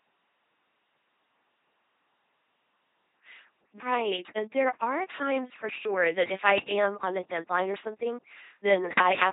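Throughout, the speech has passed through an LPC-10 vocoder, which fits a 2.4 kbit/s coder. Each moment is rebuilt as either pulses or noise through a simple vocal-tract filter, so the speech becomes a heavily damaged, buzzing robotic voice with stray hiss, and nothing above 3.9 kHz.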